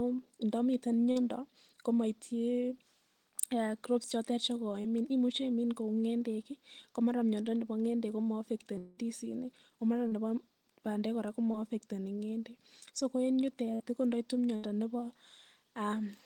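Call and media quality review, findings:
Short concealed packet loss, four events: 1.11–1.17 s (about 40 ms lost), 4.81–4.86 s just after "crops chotet" (20 ms), 10.07–10.13 s just before "nebo bandek" (40 ms), 11.51–11.55 s (20 ms). Brief smears and wobbles in the speech. Receiver jitter buffer/decoder concealment extrapolated the last pitch period or shaped noise, then crossfaded back. On a spectrogram, harmonics are briefly frozen and smoothed. On the waveform, a few repeated cycles end in a blended seam.

Long network dropout at 8.78–8.99 s: about 200 ms of speech missing, replaced almost entirely by synthetic continuation with no silent gap. It sounds like a buzz or hiss decaying as the speech jumps ahead. The likely cause is a transport stall, with the decoder's concealment stretching the final frame. On a spectrogram, flat harmonic bands fade in level. On the waveform, a periodic, shrinking envelope is followed by an abrupt resumption.

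Burst of packet loss at 13.75–13.82 s, just before "ko ndoitu" (about 40 ms lost), and at 14.56–14.65 s (about 80 ms). Several consecutive packets were dropped or arrived late. Concealment held the last sound and attenuated it, so the speech skips forward. On a spectrogram, these show as short horizontal smears dimming toward the gap's end. On the waveform, a tapering repeated segment is followed by a discontinuity.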